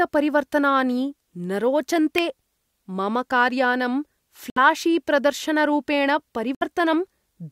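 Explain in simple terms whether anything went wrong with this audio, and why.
A sharp snap at 2.18 s is an electrical switching spike. It was likely a nearby switch or motor arcing, picked up by the audio line.

The speech cuts to silence at 4.50 to 4.58 s and again at 6.55 to 6.63 s. Each is a Bluetooth dropout, likely from late wireless packets being dropped.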